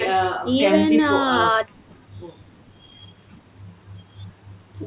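Nothing stood out on listening to this speech, which carries the narrow telephone-style band of a G.711 A-law call path with nothing above 4 kHz.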